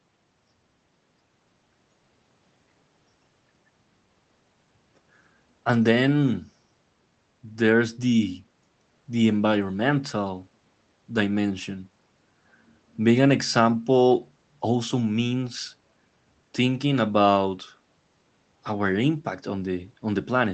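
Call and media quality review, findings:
No faults found in the speech. The call path is audible as a codec band limit, with high frequencies cut off at 8 kHz and a coding texture consistent with Opus at a low bitrate near 20 kbps.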